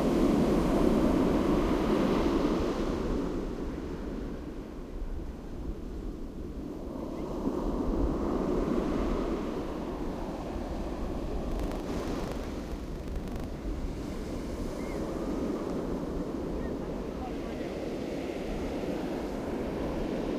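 This is a recording of sounds, and between 11.48 and 13.44 s it picks up a hard, rattly buzz at 25 Hz that's clearly buffer tearing. The app writing the ring buffer and the hardware reading it have drifted so they cross inside every period, which points to a period of around 40 ms. In each one, roughly a tenth of the buffer still holds audio from about a tenth of a second earlier, spliced in with abrupt joins on both sides, so the sound turns grainy and mechanical.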